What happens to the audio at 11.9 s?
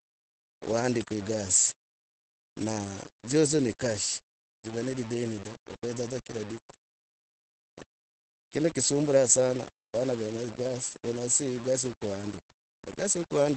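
At 11.9 s the sound is grainy and gritty, with distortion that tracks the signal and sits roughly 20 dB below it. This runs through the whole clip and is likely low bit depth without dither: rounding to about 6 bits with no dither leaves coarse steps whose error follows the waveform.

The same moment also carries heavy Opus voice compression, present throughout. The SILK coder in wideband mode cuts everything above 8.7 kHz and codes the excitation coarsely, which fits a rate near 10 kbps. The speech comes out muffled, hoarse and slightly robotic.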